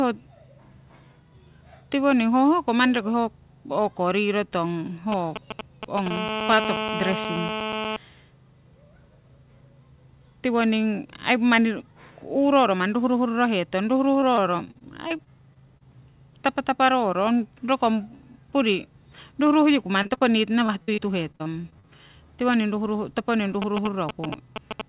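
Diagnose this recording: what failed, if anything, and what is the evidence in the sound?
GSM signalling bursts, picked up in the analogue wiring: from 5.12 to 6.08 s, just after "o'ko riro tong", and again from 23.62 s to the end, roughly 5 dB below the speech. A nearby phone's intermittent radio pulses are rectified into galloping ticks and brief 217 Hz buzzes. The stop-start rhythm distinguishes them from a call's continuous buzz.

GSM phone buzz, also an analogue-wiring fault: from 6.11 to 7.97 s, a hard, raspy 217 Hz buzz with many harmonics sits about 4 dB below the speech. It follows straight on from the bursts, as if the phone moved into an active call and began transmitting continuously. It stays steady rather than galloping.

Repeated packet loss (robotic sound), a network fault: 14.2 to 15.83 s has 11 gaps, 20.03 to 20.22 s has 4, and 20.66 to 22.0 s has 10. The longest gap is 55 ms. 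Concealment patches each hole by extending the last sound, producing choppy speech with pieces missing. Unlike the GSM faults, there is no added tone. Through the G.711 path, which carries nothing above 4 kHz, the speech itself breaks up.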